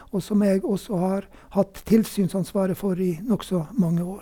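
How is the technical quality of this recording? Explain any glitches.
Listening closely, nothing in the recording stood out as a technical glitch.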